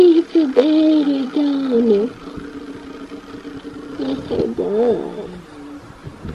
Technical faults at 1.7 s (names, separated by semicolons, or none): none